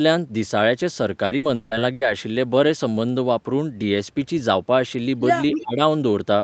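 A speech recording with three faults. From 1.25 to 2.03 s there is repeated packet loss, giving a robotic sound. Four gaps hit this stretch, the longest 160 ms. Each hole is filled by stretching the preceding sound, so almost half the span is synthetic and choppy. At 5.53 to 5.63 s a delayed copy of the speech appears, about 287 ms late and only slightly quieter than the talker. This is an echo leak. Likely a loudspeaker at the far end was picked up by its microphone, and the echo canceller let part of it back through. Right after, from 5.61 to 5.80 s, the speech is suppressed in double talk. The voice sinks by roughly 20 dB for about a fifth of a second. The likely cause is the canceller mistaking the overlapping voices for echo and damping everything. Nothing is heard above 8 kHz, which fits the Opus call codec's bandwidth.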